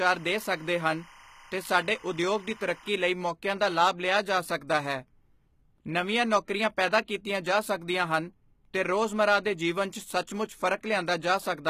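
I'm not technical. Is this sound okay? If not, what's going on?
No. For the first 2.9 seconds, a timecode signal from a nearby cable or track leaks into the recording. This is timecode bleed: a steady chirping warble, flipping between tones near 1 kHz and 2 kHz, sits behind the speech until just before "ਲਈ ਮੌਕਿਆਂ ਦਾ ਲਾਭ".

Throughout the clip, the sound has likely passed through HE-AAC compression, which keeps only the lower range and fakes the treble by copying lower sounds upward. Because that rebuilt upper range isn't the original, its tones don't line up, and the damage is plainly audible.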